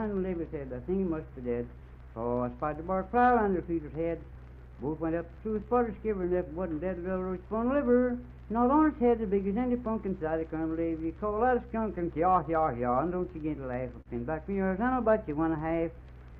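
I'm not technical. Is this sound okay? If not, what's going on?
No, it's not quite right. There are three related problems.

First, there's clock drift between sender and receiver. The device that sent this audio kept time a bit slower than the one playing it, by roughly 4 percent. It's like two people clapping together when one is slightly slow: the receiving end keeps running short of sound and has to make up the difference somehow.

The way it makes up that difference is through repeated timing corrections, from about 0.15 s right through to about 16.32 s. The receiver keeps repeating tiny slivers of sound to fill the gaps, always in the same direction, at uneven intervals. Each patch is small, but together they add about half a second and leave everything playing at about 97 percent speed. If you notice it at all, it comes across as a slightly unsteady pace, with little hiccups here and there.

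Finally, there's a short stall from a late packet at about 14.01 to 14.08 s. One chunk of audio arrived late, so the player ran dry and held the last bit of sound for about 45 ms until the chunk showed up. Nothing was lost, but that moment sounds stretched, maybe with a faint buzz or dip.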